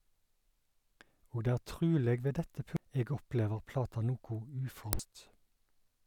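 At 2.77 s, damaged data in a compressed stream gives a brief blip. Corrupt bytes make the decoder misread frames and lose sync. From 4.62 to 5.00 s it recurs, longer, as a glitch while the decoder hunts for a valid frame header.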